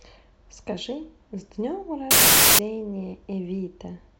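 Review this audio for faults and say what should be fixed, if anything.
From 2.11 to 2.59 s, loud noise buries slowed, lowered speech: a wrong sample width, packed 24-bit data read as 16-bit, at 0.667 speed. Unlike a byte-order swap, this also shifts pitch and timing. Prevent it by taking the sample width from the file header rather than assuming 16-bit.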